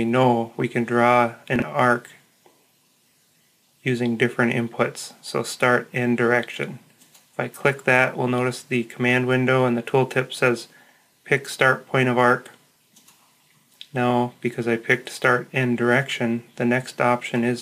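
At 1.56 to 1.62 s and again at 12.72 to 12.76 s there is a brief jumbled stutter, where the sound seems to skip forward and then double back. These are chunks out of order. A block of roughly 21 ms plays late: two blocks late in the first case and one in the second. Nothing is missing, but the misplaced block creates three hard joins.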